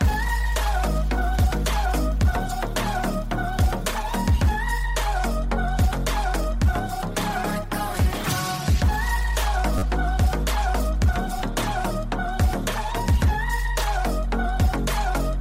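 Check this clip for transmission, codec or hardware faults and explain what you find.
Two repeated buffer faults occur. From 9.78 to 9.82 s a roughly 10.7 ms slice plays four extra times, heard as a brief buzz. At 11.39 s one extra play gives a click. Late audio made the device replay its last buffer, which fits 512 samples.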